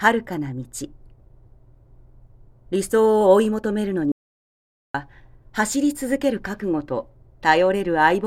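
At 4.12 s the sound cuts off abruptly into an audio dropout to silence lasting until 4.94 s, about 0.83 s lost, likely from the input disconnecting or muting while recording continued. The waveform shows a flat line, the spectrogram a fully black band without room tone.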